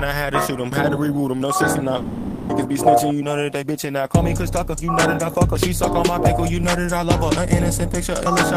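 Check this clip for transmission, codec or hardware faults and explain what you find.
There is one fault, a long network dropout from 1.97 to 2.51 s. For 520 ms a buzz or hiss continuing the preceding sound fills the gap, with no silence. This is likely the receiver concealing lost packets. The audio then resumes, missing that stretch.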